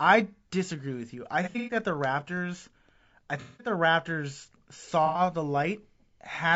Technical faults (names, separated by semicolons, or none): low-delay AAC compression; AAC frame loss with concealment